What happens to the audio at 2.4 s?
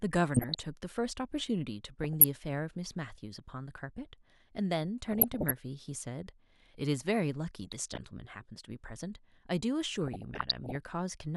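Right around there you're hearing DAB burbling, which runs from about 2.03 s to 2.42 s, so 2.4 s lands at its tail end. Weak reception let bit errors, on the order of a few tenths of a percent, slip past the error correction into the MP2 data. Corrupted samples put short blips of noise into individual sub-bands, and corrupted scale factors make sub-bands leap in level for up to a frame, across a couple of dozen damaged frames. The speech gets a burbling layer of noise blips over it.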